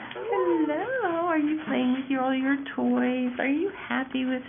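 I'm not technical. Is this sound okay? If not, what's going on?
Yes, nothing stood out as a problem when listening to this sound.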